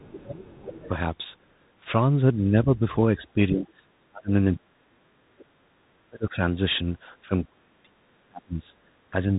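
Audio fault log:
Throughout: Bluetooth CVSD headset codec. Nothing passes above 3.8 kHz, so a spectrogram shows a hard ceiling. Sibilants turn scratchy, loud bright passages overload the one-bit slope tracker, and a granular hiss sits under the speech, consistent with 64 kbps CVSD.
0.00–0.04 s, 0.78–0.88 s, 5.39–5.45 s: other side's voice leaking through. Brief scraps of a second voice, roughly 20 to 30 dB below the speech, likely loudspeaker echo the canceller missed. They show as faint, short energy smudges between or under the main talker's waveform.
0.04–0.79 s, 2.43–5.06 s, 5.62–6.42 s, 7.25–9.37 s: speech suppressed in double talk. The voice dips, dulls or cuts out in pieces, by up to around 30 to 40 dB. The waveform shows sudden envelope holes and the spectrogram shows missing bands, likely the echo canceller ducking during overlapping talk.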